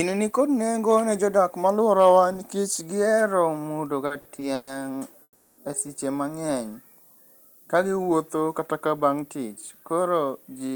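Throughout the speech there is a steady, thin hiss that climbs sharply toward the top of the band. This is low bit depth with noise shaping. The signal carries so few levels, consistent with roughly 9-bit quantisation, that the rounding error is large, and feedback pushes that error into the highest frequencies. The hiss sits around 30 dB below the speech. Unlike broadband background noise, it barely touches the low end and does not change with the room or the talker.

From 4.06 to 4.80 s the audio drags in a repeated stall, or stutter. The receiver's jitter buffer ran dry five separate times as packets arrived late. Each time it stretched the last sound to cover the wait, filling about 230 ms in all, roughly 37% of that stretch, with the longest hold about 130 ms. Nothing is lost, so the speech resumes intact at "e seche mang'eny". What separates this from a single freeze is the choppy, hiccuping rhythm of several short holds.

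From 5.23 to 5.59 s comes a call audio freeze. The sound hangs as one continuous held tone that fades, ending in about 50 ms of silence, before speech picks up again at "e seche mang'eny". The 350 ms fill matches a 350 ms jump in delay, most likely packets held up in transit. Because the stream continues where it stopped with nothing missing, the result is one inserted pause rather than a cut.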